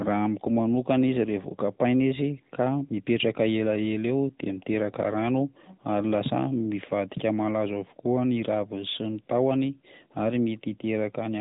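Throughout, the speech was squeezed through the AMR narrowband mobile codec, which fits about 10.2 kbps. Nothing above 3.8 kHz survives, leaving a thin, plainly buzzy, synthetic phone sound.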